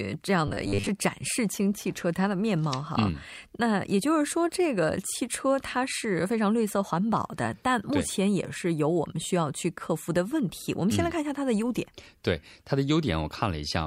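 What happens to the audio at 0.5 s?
New audio likely arrived too seldom, so from 0.48 to 0.89 s playback filled gaps by looping a short buffer for about half the time, which fits a 10 ms buffer. The result is robotic sound from repeated short buffers, a rigid, metallic 100 Hz buzz that still roughly follows the speech.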